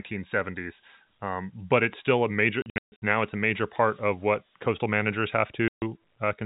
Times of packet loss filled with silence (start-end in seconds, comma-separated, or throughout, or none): 2.62-3.00, 5.68-5.82